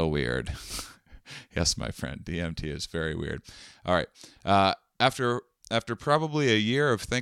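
No audible faults anywhere in the speech; nothing to flag.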